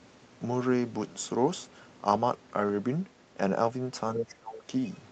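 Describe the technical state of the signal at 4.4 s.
At 4.4 s the speech is being pushed down, sinking by roughly 25 dB between 4.22 and 4.66 s before it comes back up. That's likely speech suppressed in double talk: with both ends talking, the echo canceller mistook this talker for loudspeaker echo and squashed it.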